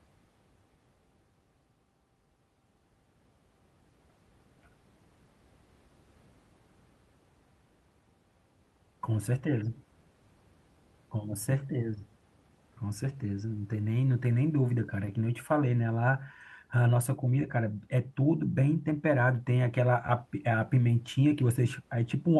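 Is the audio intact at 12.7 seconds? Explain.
Yes, the speech at 12.7 seconds is intact, with only the room's own background noise, sitting about 39 dB below the speech, present beneath it as part of the recording itself.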